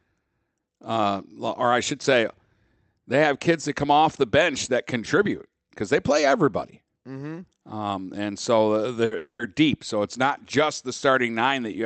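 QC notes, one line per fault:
9.05–9.13 s, burst of packet loss: Right after "and so uh", a short run of packets failed to arrive in time. The receiver extended the last sound across the 60 ms gap as a held buzz that fades, and the audio then resumes further on with that piece missing.
9.17–9.41 s, long network dropout: Incoming audio likely stopped arriving for a longer stretch. The last sound is stretched into a fading buzz or hiss, which thins into roughly 50 ms of silence before the audio returns further on, missing about 0.22 s of material.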